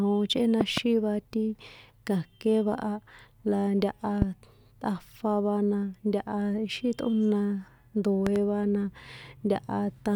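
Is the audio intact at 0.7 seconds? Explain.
No: a loud pop, two sharp pulses from 0.61 to 0.80 s, likely a voltage spike, sits well above the speech, showing as tall waveform spikes and full-height vertical spectrogram lines.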